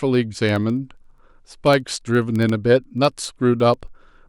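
From 0.14 s to 4.22 s the speech carries word clock ticks. The receiver runs on its own clock, a few hundred ppm off the sender's, so each slip drops or repeats one sample, giving about seventy sharp ticks, roughly every 70 ms.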